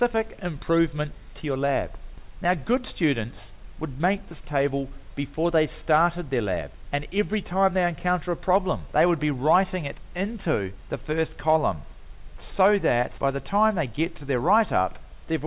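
No technical faults can be heard anywhere in the signal, which stays continuous and stable throughout.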